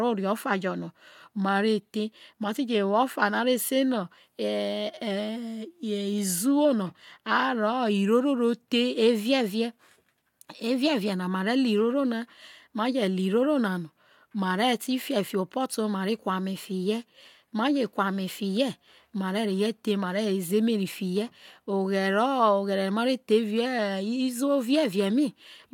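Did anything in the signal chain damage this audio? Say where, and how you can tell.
No, nothing in the signal chain has left an audible mark on this speech recording. Every stage from capture to playback passes the sound along without any damage a listener can hear.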